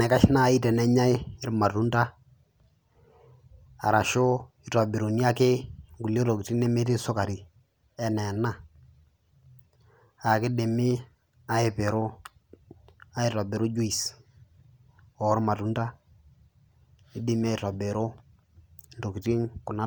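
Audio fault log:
No faults are audible anywhere in this speech recording.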